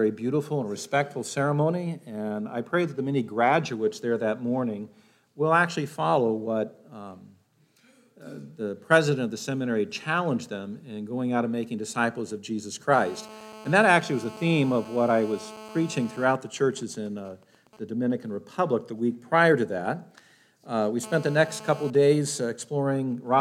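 GSM phone buzz from 12.94 to 16.25 s, and again from 21.04 to 21.90 s: a nearby 2G handset in a call emits radio bursts about 217 times a second, which the audio circuitry rectifies into a hard, raspy 217 Hz buzz rich in harmonics. It sits about 18 dB, then about 17 dB, below the signal.

GSM signalling bursts from 16.29 to 17.79 s and from 21.95 to 23.27 s: when the phone's user falls silent, the handset transmits only sparse burst groups. These are heard as even ticks with a longer 217 Hz buzz twice a second, fainter than the continuous buzz and quieter still in the second stretch.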